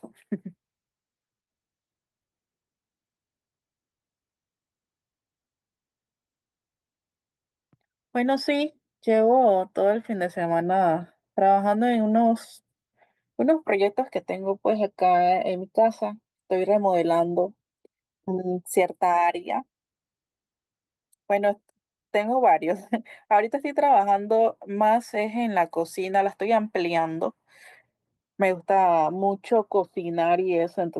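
No technical faults are audible.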